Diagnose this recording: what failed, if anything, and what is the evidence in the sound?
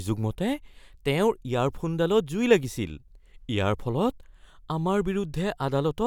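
Nothing failed, and there is no evidence in the sound of any fault at any stage.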